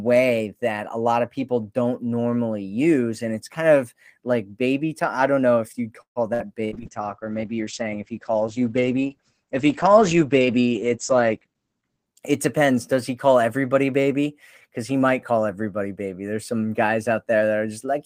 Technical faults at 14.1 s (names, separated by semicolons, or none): none